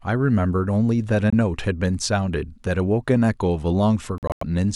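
Packets likely arrived too late and were dropped in a Bluetooth dropout: speech cuts to silence at 1.30 s for about 23 ms, then in scattered gaps from 4.18 to 4.43 s, the longest about 93 ms, resuming as though it had played on.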